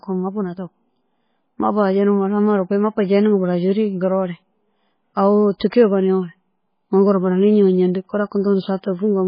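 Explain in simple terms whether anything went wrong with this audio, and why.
Throughout the speech, the sound is dull and watery, with nothing above about 5 kHz, so s sounds lose their crispness and swirl. That points to MP3 compression, likely squeezed hard to save space. It differs from simple muffling because the remaining sound also wobbles and chirps.

From 5.70 to 5.72 s, a brief hiss comes just before a sharp sound, and the sound's start seems smeared. This is pre-echo: the compressor spreads its noise across a short stretch, so it leaks in ahead of the attack instead of trailing after it like an echo.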